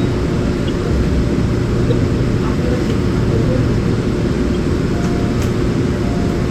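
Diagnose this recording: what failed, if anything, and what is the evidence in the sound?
The failure sits in the codec stage: a corrupt frame was decoded. From 1.90 to 1.93 s, a short glitch cuts across the everyday sound, peaking around -10 dBFS. It lasts about one codec frame. Bits in that compressed frame were damaged, and the decoder played it anyway, applying wrong gains and misreading spectral codes. On a spectrogram this shows as a narrow vertical smear of energy at unrelated frequencies. On the waveform it appears as an abrupt, frame-long jump in level.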